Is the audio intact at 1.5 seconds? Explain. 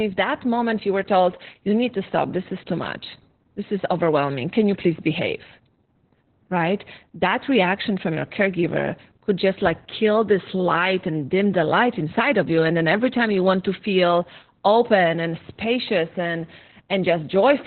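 No. At 1.5 seconds the speech carries Opus voice compression, present across the whole clip. The encoder has fallen back to narrowband SILK linear-prediction coding, cutting everything above about 4.2 kHz and quantising the excitation coarsely, which fits a bitrate near 8 kbps. The result is muffled, hoarse and slightly robotic speech. A plain low-pass filter would only dull the sound, but here the rough, buzzy grain of the excitation gives the codec away.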